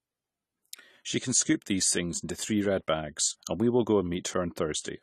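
From start to finish the speech sounds dull and smeared, with plainly audible AAC compression damage: nothing reaches above 14.1 kHz, and sibilants and sustained sounds take on a fizzy, warbling texture. The likely cause is AAC-LC coding at a low rate, which fits roughly 32 kbps. The encoder had too few bits to quantise every frequency line, so it dropped the top of the spectrum and coded the remaining bands coarsely.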